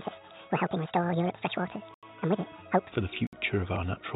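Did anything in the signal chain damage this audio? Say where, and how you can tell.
Yes. From 0.0 to 2.92 s the sound plays hurried and high, at 1.77 times speed and nearly ten semitones up. This section at the wrong speed likely comes from a playback-stage clock mismatch.

Two blocks of digital silence, at 1.94 to 2.03 s (85 ms) and 3.27 to 3.33 s (60 ms), cut in and out abruptly. This points to a driver or buffer underrun; the first fits a 4096-sample buffer.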